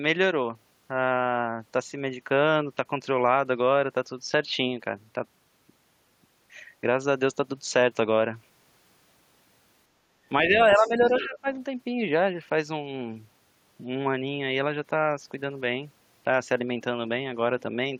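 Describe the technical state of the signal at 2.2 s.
The speech signal at 2.2 s is intact, with no fault present at that moment.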